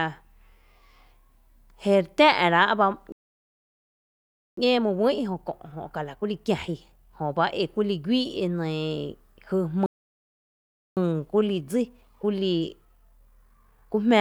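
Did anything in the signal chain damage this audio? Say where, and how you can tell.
Yes, the damage is at the playback stage. There are two playback stalls. The speech cuts out dead right after "rá’ bá" at 3.12 s and stays silent for about 1.45 s until 4.57 s. It drops out again from 9.86 s to 10.97 s, about 1.1 s. Each time the talk stops mid-flow and then resumes, so the player was likely starved of data or had its output thread blocked, and nothing reached the output until it recovered.

Straight after each gap there's time-compressed catch-up. From 4.57 s to 7.57 s the speech runs hurried, about 1.15 times normal speed, and from 10.97 s to 13.97 s it runs about 1.1 times fast. Pitch holds steady through both stretches. That's the player trimming its backlog by cutting small slices out and cross-fading across the joins, rather than simply speeding up playback.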